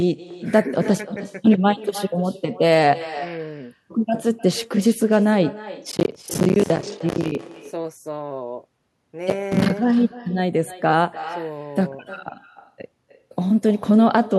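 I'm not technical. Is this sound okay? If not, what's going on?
No. Two things are wrong.

Echo with no canceller: the person at the other end is playing the call through a loudspeaker, their microphone picks it back up, and nothing strips that out. So your voice returns to you after travelling there and back. Throughout the whole recording, every phrase is followed, roughly a third of a second later, by a fainter, thinner copy of itself.

Processor overload crackle: the computer handling the audio got too busy to keep up, so it repeatedly failed to deliver very short slices of sound on time, each about a hundredth of a second long. Every missed slice became a tiny dropout into silence with an abrupt edge. Strung together, these make a gritty, tearing crackle from 5.92 to 7.44 seconds and again, more briefly, from 9.3 to 9.7 seconds, stopping once the strain eased.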